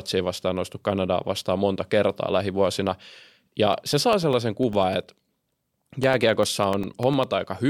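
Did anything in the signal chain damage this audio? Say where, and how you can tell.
Yes: periodic USB or driver dropouts at the driver stage. From 3.73 to 7.34 s, roughly 1 ms gaps of silence tick every 0.1 s, showing as evenly spaced vertical spectrogram lines.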